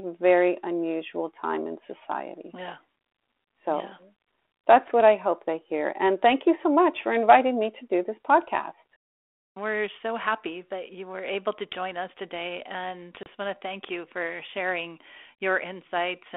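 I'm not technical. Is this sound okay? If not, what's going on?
No. At 13.23 s, between "join us today and" and "want to thank you", there is packet loss on an ADPCM call: about 30 ms of speech drops to sudden silence. Unlike a clean gap, the sound comes back slightly off, with a brief click or roughness, because the receiving phone has lost track of the audio and needs a moment to catch up.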